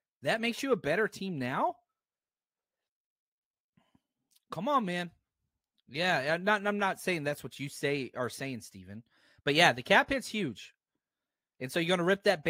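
Nothing in the speech stood out on listening.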